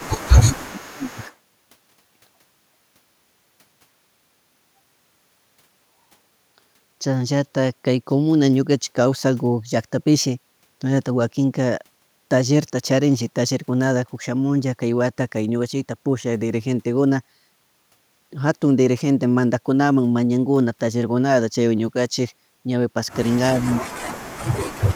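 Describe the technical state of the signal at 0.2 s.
At 0.2 s the speech is caught in a stretch of speech suppressed in double talk, running from the start of the clip to 1.21 s. The level dips sharply, at its deepest by around 20 dB. Parts of the sound thin out or drop away in pieces, for about a second in total. The likely cause is an echo canceller that heard both sides at once. It could not tell the talker from the loudspeaker echo, so it pulled both down.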